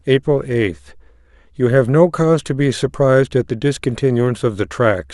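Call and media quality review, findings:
No faults found in the speech recording. Nothing to log against any component in this call.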